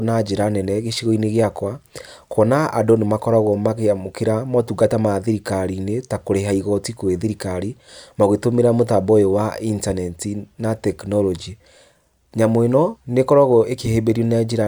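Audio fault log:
No audible faults detected.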